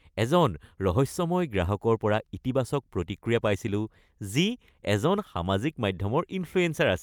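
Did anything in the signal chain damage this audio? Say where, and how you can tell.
No, nothing in the signal chain damaged this audio.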